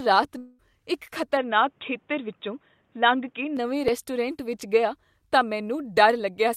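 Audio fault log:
0.37 to 0.61 s, long network dropout: the sound breaks into a fading buzz lasting about 0.21 s, with roughly 0.22 s of audio never played before the speech resumes further on. This is likely a stretch of packets that never arrived, the receiver stretching the last sound to cover the gap.
1.37 to 3.57 s, input switched to a poorer device: the speech turns dull and boxy, a faint new noise floor well below the signal, level unchanged and no gap at either switch. This likely reflects the recording moving to a narrower-band microphone or headset profile and then back.
3.88 s, dropped buffer (overrun): a tiny skip forward, about 5 ms lost, just before "ਵਿੱਚ ਗਿਆ ਤਾਂ". The likely cause is a buffer overwritten before it was read, so the audio on either side is butted together without any silence.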